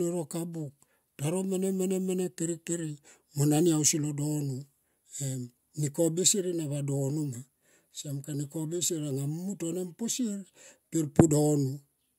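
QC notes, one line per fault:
Nothing stood out on listening to this speech recording.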